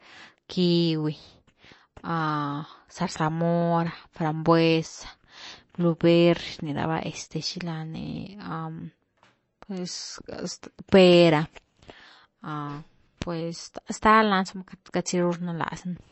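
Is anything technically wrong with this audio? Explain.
Yes. All the way through, this speech is likely MP3 compression: nothing above 8 kHz, plainly audible watery swirl and smeared attacks, which fits an encoder starved at roughly 35 kbps.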